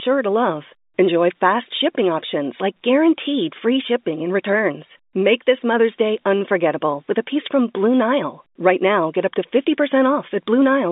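Nothing stood out on listening to this speech, which comes through with the narrow bandwidth of ordinary G.711 telephone coding.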